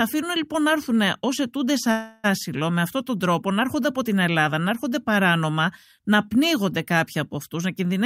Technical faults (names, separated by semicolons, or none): call audio freeze